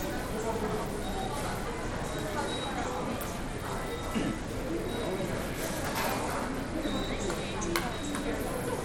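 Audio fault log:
Throughout, Bluetooth SBC compression: The top end is thin and unsteady, with treble that drops out and flickers in and out. A gritty, grainy noise rides on the sound, with aliasing hash in the highs. The damage is plainly audible. This is likely a low-rate SBC link. With too few bits, the weak upper sub-bands starve and the rest are coarsely quantised. The degree of damage fits a rate near 96 kbps.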